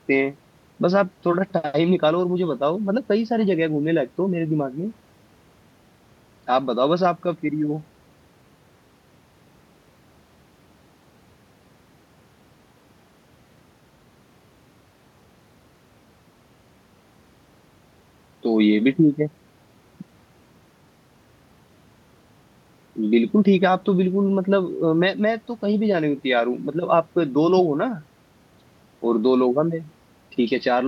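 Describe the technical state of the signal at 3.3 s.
At 3.3 s the speech signal is intact, with no audible technical fault at that moment.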